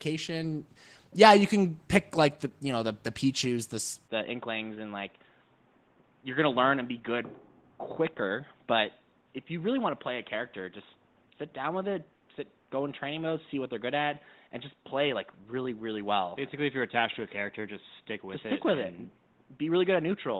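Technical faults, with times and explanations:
Throughout: Opus voice compression. At 16 kbps in hybrid mode, the excitation is coded coarsely in 20 ms frames. This leaves the speech plainly hoarse and slightly robotic.
4.08 s to the end: input switched to a poorer device, likely. The sound abruptly turns dull, with nothing above 3.8 kHz and no gap. It drops about 5 dB, with new background noise roughly 40 dB down.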